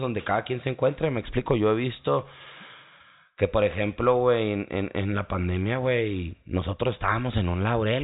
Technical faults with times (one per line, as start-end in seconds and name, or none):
none